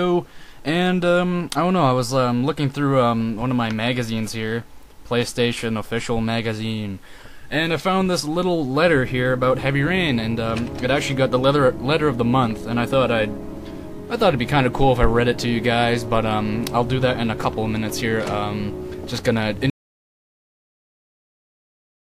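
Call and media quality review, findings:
Audio dropout to silence, 19.70 s to end. Sound cuts off mid-flow into silence, no room tone, last 2.4 s. Input path likely lost (disconnected device, failed link or mute) while recorder kept writing silence. Content after cut unrecoverable.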